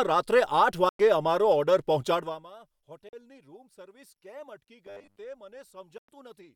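Bluetooth dropouts in this speech recording at 0.89 to 1.00 s, 3.09 to 3.13 s and 5.98 to 6.09 s cut the sound to silence for about 100, 40 and 100 ms. That points to a likely cause of audio packets arriving too late for the headphones, with playback resuming as if time had run on. A robotic sound from repeated short buffers appears from 4.87 to 5.19 s. It is a rigid, metallic 100 Hz buzz, which fits a 10 ms chunk being replayed while most of the real audio is skipped, likely because new data arrived too seldom.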